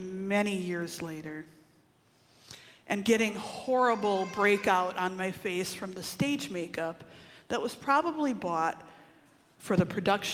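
No technical faults are audible.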